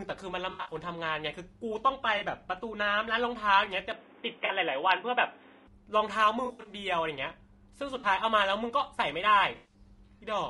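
Through the whole clip the speech has a rough, grainy texture, with noise filling the gaps between pitch harmonics and a thin, synthetic-sounding top band. That is the mark of low-delay AAC compression, likely AAC-ELD at a bitrate around 32 kbps. Its short frames resolve harmonics poorly. On a spectrogram the harmonic stripes look blurred and speckled, and the upper band looks patchy rather than smoothly detailed.

AAC frame loss with concealment first appears from 0.51 to 0.75 s. About 140 ms of audio is missing across that span, and the longest gap is roughly 70 ms. The decoder rebuilds each gap from the last good spectrum, so the sound turns smeared, noisy and phasey. Shorter 40 ms patches follow at 2.17 to 2.23 s and 4.45 to 4.50 s. A longer scattered burst runs from 6.45 to 6.73 s, covering about 160 ms. Then come 7.99 to 8.05 s and 9.55 to 9.74 s. On a spectrogram each patch shows as a smudged, noise-like block where the harmonic lines break up.

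From 3.91 to 5.67 s the sound goes dull and boxy, with nothing above 3.8 kHz. A new noise floor sits about 30 dB below the speech. There is no gap and no level jump, which points to an input switched to a poorer device, likely a headset call profile or second microphone. On a spectrogram the top band is sharply cut off, with a flat haze of added noise underneath.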